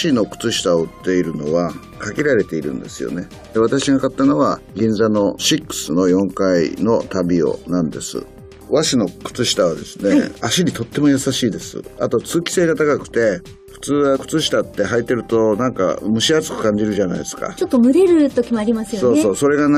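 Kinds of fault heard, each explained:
No faults turned up here at all, so there's nothing to list or explain for this one.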